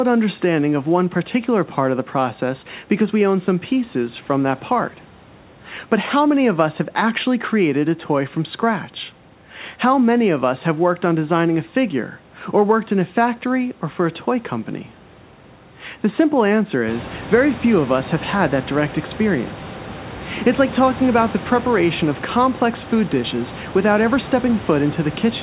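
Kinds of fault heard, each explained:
No faults heard.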